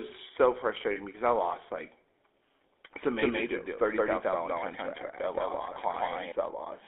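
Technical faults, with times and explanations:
Throughout: GSM full-rate codec. The speech has the buzzy, gravelly roughness of the original GSM coder, which models the vocal tract and excites it with a regular pulse train built from only every third excitation sample. Nothing above 4 kHz survives, and the band sits at roughly 300 Hz to 3.5 kHz, which fits a 13 kbps full-rate link. The coding damage is plainly audible across the whole clip.
0.92 to 1.0 s and 5.74 s: lost GSM frames. Just before "because I lost like", a 40 ms stretch turns into a rough, metallic ring instead of the expected sound, and a shorter ring of about 20 ms is heard at 5.74 s. The decoder fills each gap by repeating the parameters of the last good frame, so the previous sound is frozen and buzzes briefly. The gaps are too short to fade fully to silence.
3.14 to 6.32 s: doubled audio track. A second full-band copy of the speech runs about 150 ms behind the original at about the same level, giving a flat, stuttering doubling with no decay or room colour. 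It starts and stops abruptly at those times. The likely cause is the same signal being picked up again through a slower path, or an edit leaving two misaligned copies in the mix.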